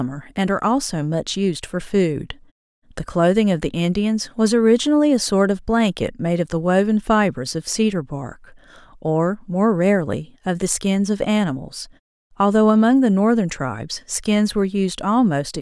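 Nothing here sounds wrong to me; the speech comes through with no technical faults to point out anywhere along the way.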